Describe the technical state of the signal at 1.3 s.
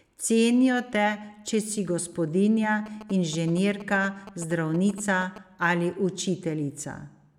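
At 1.3 s the signal is intact, with no audible fault at that moment.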